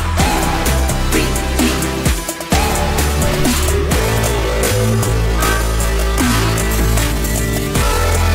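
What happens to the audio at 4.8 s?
At 4.8 s the audio is inside a time-stretched section running from 3.98 s to the end, slowed to about 0.6 times its pace, likely by software repeating short pieces to lengthen it. It drags, yet unlike slowed playback, the pitch doesn't drop.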